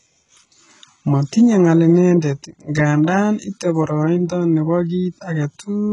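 Likely HE-AAC compression at a very low bitrate throughout: spectral band replication rebuilds the treble above the coded band, leaving s sounds gritty and lispy, with nothing above 11.1 kHz.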